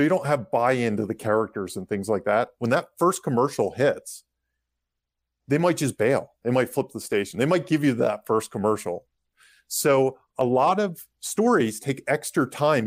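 A single sharp click cuts through the speech at 10.41 s, a brief tick that removes nothing audible. It is likely dropped samples: a fraction of a millisecond of the stream went missing, so the waveform jumps abruptly to a later value.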